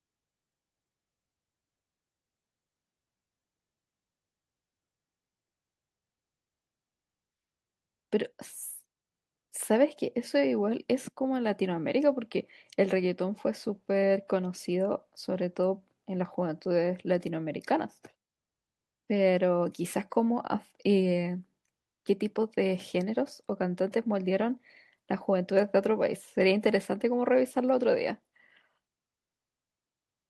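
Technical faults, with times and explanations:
No technical faults audible anywhere in the recording; nothing to log.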